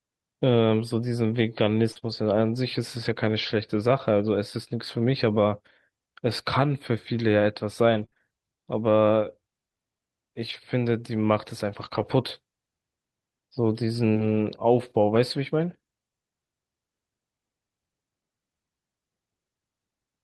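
Between 1.91 and 1.97 s, and again from 1.99 to 2.04 s, there is short concealed packet loss. About 40 ms, then 20 ms, never arrived in time. The receiver extended the preceding speech to cover each hole, which leaves a brief smear and wobble where the real signal should be.

Interleaved with these, a lost packet was rebuilt from error correction at 1.95 to 1.97 s, then three lost packets across 2.04 to 2.14 s, and again one at 3.06 to 3.08 s. The decoder played a low-bitrate copy carried in the following packet, so nothing drops out. Those stretches sound rougher and noisier than the surrounding audio.

From 7.9 to 15.2 s there are scattered short gaps, roughly seven, the longest around 30 ms. Each was patched by continuing the previous sound, leaving isolated ticks and small hiccups amounting to about 1% of that span.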